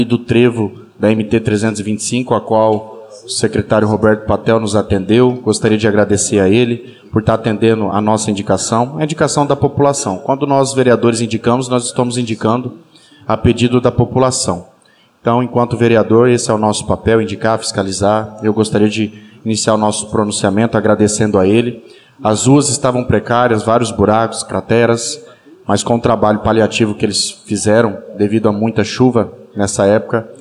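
Nothing stood out as a technical problem on listening.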